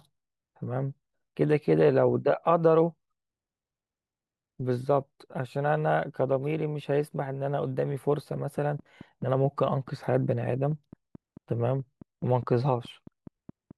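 From 7.92 s to 13.72 s, a train of clicks ticks over the speech and through its pauses. It comes at a regular 4.7 clicks per second, about thirty in all, and peaks near the speech level. The likely cause is interference from nearby equipment or a faulty connection or power supply. On a spectrogram, evenly spaced thin vertical lines run across all frequencies. A waveform shows matching sharp spikes.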